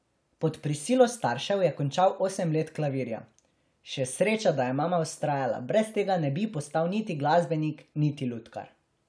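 No technical faults can be heard in the speech at any point in the recording.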